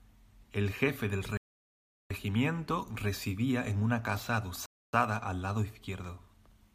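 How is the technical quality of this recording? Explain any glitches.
Two dropouts interrupt the speech. A Bluetooth stall hits at 1.37 s, cutting the sound to dead silence for 0.73 s until 2.10 s, and a second one at 4.66 s, right after "residía en una casa", silences it for 0.27 s before it resumes with "al lado". Both are likely wireless stalls: delayed packets let the headphones' buffer run empty, so playback freezes and restarts once the resent data arrives.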